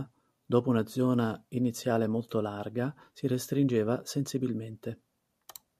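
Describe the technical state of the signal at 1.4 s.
At 1.4 s the signal is intact, with no audible technical fault.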